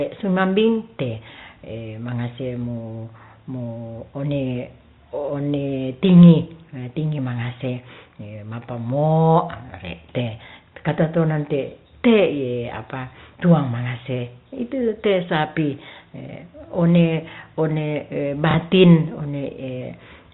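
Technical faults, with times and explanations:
18.51–18.54 s, packet loss with last packet repeated: 30 ms of audio is replaced by a replay of the preceding segment, causing a small blip, consistent with a single lost packet.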